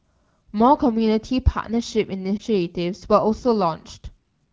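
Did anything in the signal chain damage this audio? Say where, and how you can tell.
Yes. The damage sits at the network stage, as lost AMR speech frames. At 2.38 to 2.42 s the speech briefly dips or warbles, a gap of about one 20 ms frame, which points to a single lost frame. Radio errors made that frame fail its checksum, so the decoder repeated the last good pitch and vocal tract settings at reduced gain. The wideband codec's clarity, consistent with a mid-rate AMR-WB mode, is audible around the gap.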